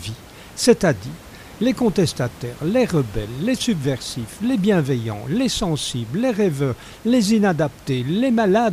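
A speech recording with nothing technically wrong, the only background being the room's own noise sitting about 22 dB below the voice.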